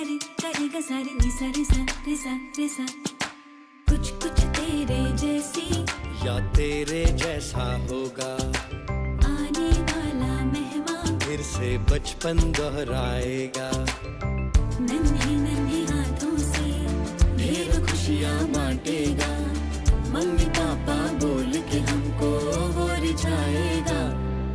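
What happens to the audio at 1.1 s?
Nothing goes wrong at 1.1 s; the audio plays through that moment intact, with no dropout, click, distortion or other fault.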